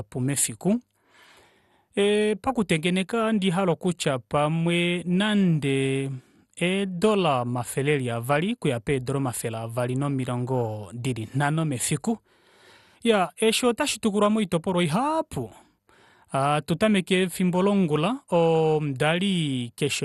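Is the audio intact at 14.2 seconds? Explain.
No. At 14.2 seconds the speech carries damage that runs through the whole clip, likely from MP2 compression at a low bitrate, consistent with something near 64 kbps. MPEG Layer II divides the signal into 32 sub-bands and rations bits among them. Short of bits, it shuts off the upper bands, so nothing remains above 12.2 kHz. The bands that survive are coarsely quantised and flicker, giving a dull, gurgling, granular texture.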